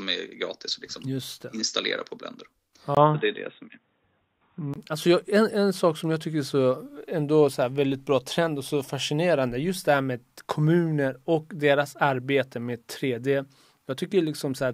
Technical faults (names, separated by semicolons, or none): input switched to a poorer device